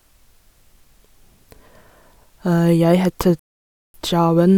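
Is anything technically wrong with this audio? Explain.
Yes. At 3.39 s the speech cuts to silence and stays silent until 3.94 s, a rebuffering stall. The player used up its downloaded audio and halted playback until more data arrived, then continued from the exact point where it stopped. No audio is skipped or repeated; instead about 0.55 s of dead air is inserted, so the speech breaks off abruptly and picks up again seamlessly after the gap, stretching the timing.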